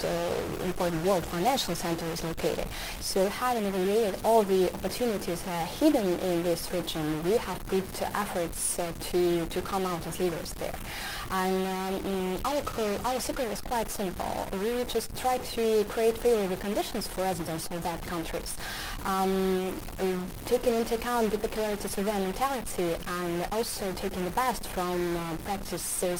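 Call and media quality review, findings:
Stuck bit, whole clip: likely a broken data line or converter output holding one bit fixed, so about half the samples are offset by that bit's weight. Result is added noise and distortion riding on the audio, with noise filling every pause.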